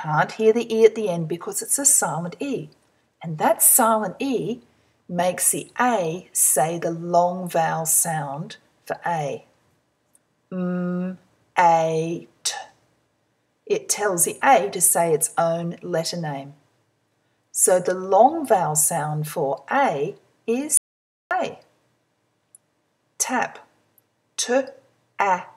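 The recording has one audio dropout to silence, from 20.77 to 21.31 s. The sound cuts off abruptly and returns just as suddenly about 0.53 s later. The gap is silent, with no room tone underneath. Whatever played in that half second is simply missing. The likely cause is a brief loss of the input signal, such as a loose connection or momentary mute, while recording carried on writing silence.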